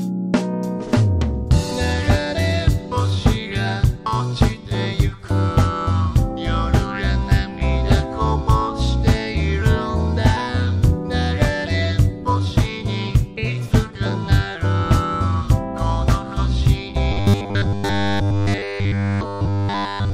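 From 17.12 s to the end at 20.14 s, the sound collapses into robotic sound from repeated short buffers: a rigid, metallic 100 Hz buzz, likely from a 10 ms block being replayed almost continuously. The waveform shows identical 10 ms cycles, and a spectrogram shows evenly spaced horizontal lines every 100 Hz.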